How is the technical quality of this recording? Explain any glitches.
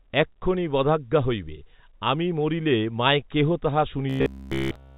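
One clear glitch at the end: robotic sound from repeated short buffers, from 4.10 s after "মরিলে মায় কেহ তাহ" to the end. Replaying a roughly 15 ms chunk, likely from late-arriving audio, imposes a rigid 66.8 Hz metallic buzz. Unlike a dropout, the sound never goes silent. The G.711 telephone band is audible throughout.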